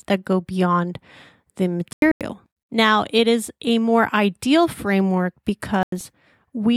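Corrupt frame muted at 1.93 to 2.21 s and again at 5.83 to 6.07 s: the speech drops abruptly into silence for about 0.28 s, then 0.24 s. Damaged bits made the decoder reject compressed frames, and the player filled their slots with silence. Each gap's length fits a run of about three frames, and the speech picks up on schedule afterwards because timing is preserved.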